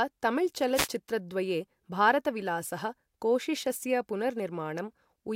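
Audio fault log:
0.74 to 0.88 s: wireless microphone noise hit. A short swish of static is heard over the speech. Reflected radio paths cancelled briefly, so receiver noise rose.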